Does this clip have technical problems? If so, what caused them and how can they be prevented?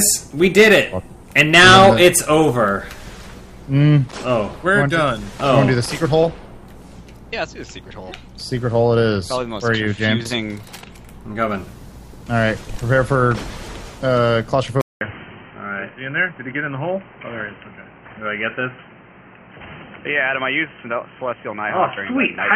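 Yes. At 14.81 s, after a 200 ms gap, the sound turns dull and a little quieter through the end at 22.55 s, with a new, modest noise floor. This is likely an input switched to a poorer device. The spectrogram shows everything above 3.1 kHz vanishing, and the waveform shows the short flat gap followed by lower peaks. To prevent it, lock the recording input to one device and disable automatic switching to headsets or call profiles.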